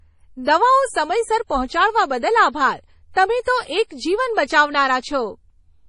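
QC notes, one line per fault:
Throughout: MP3 compression. The speech has nothing above 10.5 kHz and a heavy watery, swirling character, with s sounds turning metallic and chirpy. The encoder ran short of bits, so it removed the treble at a fixed point and dropped weaker frequency lines that flicker in and out between frames. This likely comes from a low-bitrate encode, consistent with about 32 kbps. A spectrogram shows a flat ceiling at 10.5 kHz and patchy, blinking holes below it.
3.43 to 3.47 s: pre-echo. Right after "પહોંચાડવા બદલ આભાર તમે", a hiss runs for 39 ms ahead of a sharp onset, and the attack itself sounds softened and smeared. The codec spread its quantisation noise evenly across the block, so noise scaled for the loud onset also fills the quiet gap before it. On the waveform, low-level fuzz rises before the transient. On a spectrogram, a broadband smudge precedes the attack's vertical edge.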